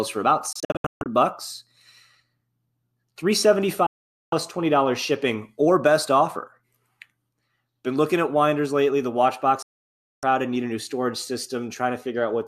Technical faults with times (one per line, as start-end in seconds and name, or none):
0.53-1.06 digital broadcast dropout
3.86-4.33 digital broadcast dropout
9.62-10.23 digital broadcast dropout